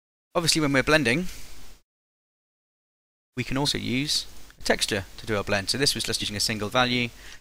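At 3.65 s and 6.20 s, compressed frames are skipped: roughly one 46.4 ms frame vanishes each time, so the audio jumps ahead by about 50 ms.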